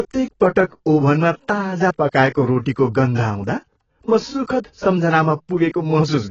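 From start to end, the speech is band-limited and smeared. Nothing sounds above about 7.9 kHz, so sibilants lose their edge and turn dull. The damage is heavy. Sustained sounds warble, and the hiss of consonants has a fizzy, grainy texture. This is likely AAC compression, with an AAC-LC coder working at a low bitrate, one that fits around 16 kbps. Starved of bits, it lowers the cut-off and leaves gaps in the spectrum.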